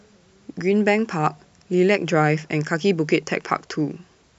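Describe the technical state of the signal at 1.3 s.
At 1.3 s the speech signal is intact, with no dropout, clipping, distortion or other fault at that point.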